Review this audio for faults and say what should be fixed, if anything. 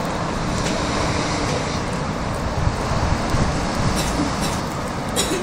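A doubled audio track runs from 2.80 to 4.60 s. A second full-band copy of the sound trails the original by about half a second at roughly equal level, with no decay or room colour, and starts and stops abruptly. It likely comes from a second, slower capture path or an edit holding two offset copies. Prevent it by routing each source through a single capture path and checking edits for overlapping duplicate regions.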